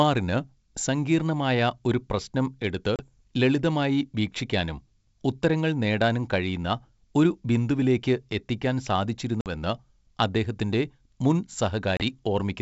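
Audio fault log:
2.96–3.04 s, 9.41–9.48 s, 11.97–12.04 s: packet loss on an ADPCM call. Hard-edged silent holes of about 30, 50 and 30 ms, each a few packets long. The decoder's adaptive predictor and step size drift from the sender's, so speech returns slightly distorted before settling.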